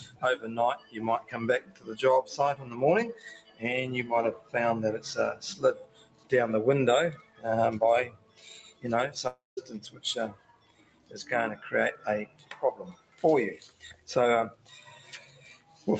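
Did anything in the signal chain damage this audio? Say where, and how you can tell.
Yes. At the call-processing stage, a noise suppressor applied to music or sounds stays on throughout. It treats steady material as noise, so gain swings by about 20 dB and the sound pumps.

The clearest sound cut by the noise suppressor falls at 0.06–4.54 s and 5.77–15.87 s. Held and decaying parts sink, by up to about 13 and 14 dB.

At 9.27–9.59 s the sound turns into a fading buzz for about 0.29 s, then silence. This is likely a long network dropout, with about 0.3 s never arriving.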